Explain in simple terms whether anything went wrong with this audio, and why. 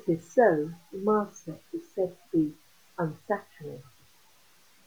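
Throughout the speech, quieter moments sound grainy and gritty, likely from low bit depth without dither. The level is chopped into coarse steps, consistent with 9-bit truncation.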